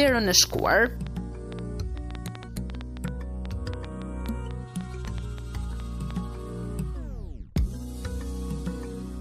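A train of clicks runs from 0.08 s to 6.12 s: roughly thirty similar-shaped pulses arriving at about 5.5 per second but unevenly spaced, each standing out by about 10 dB above the surrounding sound, so the ticking sits clearly on top of the audio and in its quieter gaps too. The repeated, near-identical impulses point to something injecting spikes into the signal path, likely electrical interference from nearby equipment or a faulty connection or power supply.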